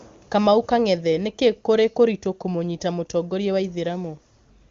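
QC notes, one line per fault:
Nothing to flag on this speech clip; it's coming through an AMR wideband (HD Voice) path at what sounds like one of its higher rates, and nothing in it needs a note.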